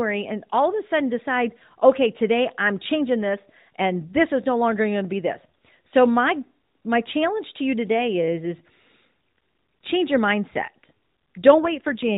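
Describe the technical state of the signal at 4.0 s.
At 4.0 s the speech is intact, with no dropout, click or distortion, just the 4 kHz ceiling and light coding texture of the AMR narrowband mobile codec it passes through.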